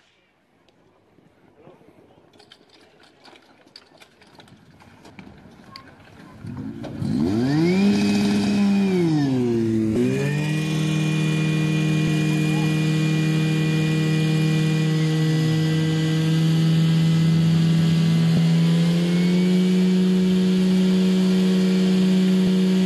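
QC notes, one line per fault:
5.10, 9.96, 12.07, 18.37 and 22.47 s: compressed frames skipped. At each point the audio jumps forward, losing about a tenth of a second, a fifth, under a tenth, a fifth again, and a few hundredths of a second. The jumps fit whole frames of about 26 ms that never reached the output. Adjacent frames overlap in this kind of codec. So each join is a short smeared blip, not a sharp click.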